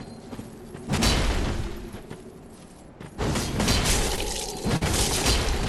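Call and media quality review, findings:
Chunks out of order at 0.93–1.02 s and 4.09–4.18 s. Jumbled moment. One 46 ms chunk plays one slot late. Chunk arrived or was written late.

Short concealed packet loss at 4.16 s. Brief smear or wobble. About 20 ms never arrived. Decoder concealment extends the last sound for 11 ms, then blends back.

Burst of packet loss at 4.77–4.83 s. Held buzz or fading hiss, then a jump ahead. About 40 ms lost in a row. Concealment fills 45 ms while fading down.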